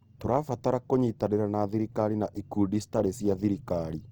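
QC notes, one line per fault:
Throughout: Opus compression. The encoder is likely running short of bits in its music (CELT) mode at a rate that fits about 24 kbps, so it keeps each band's energy but refills starved bands by folding lower content or injecting noise instead of leaving gaps. The speech therefore sounds rough and grainy, with a noisy hiss woven into the voiced parts, plainly audible, while the bandwidth stays full, reaching up to about 20.2 kHz.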